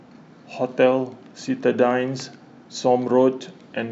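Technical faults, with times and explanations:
No technical faults can be heard in this speech recording. There is nothing to list with a time or an explanation.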